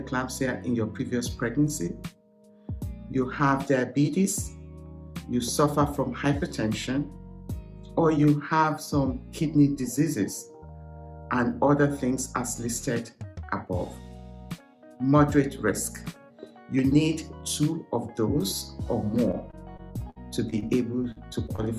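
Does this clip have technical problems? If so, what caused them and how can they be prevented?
Yes. From 19.31 to 20.64 s the network repeatedly dropped or delayed packets, causing repeated packet loss with a robotic sound. There were seven separate holes, about 180 ms of missing audio in total, the longest lasting 60 ms. Each time, the receiver stretched the last fragment it had to cover the gap, so about 12% of that stretch is synthetic continuation. The result is choppy audio with pieces missing. A steadier connection, wired instead of congested wireless, with an adaptive jitter buffer and forward error correction enabled, would prevent it.

Just after that, audio failed to arrive in time three more times, causing short concealed packet loss at 21.12 to 21.18 s (40 ms), 21.46 to 21.50 s (20 ms) and 21.56 to 21.60 s (20 ms). The decoder bridged each hole by extending the preceding sound and then blending back into the real signal. 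Each one is heard as a brief smear or wobble. Reducing network congestion and giving the receiver slightly more buffering headroom would prevent these gaps.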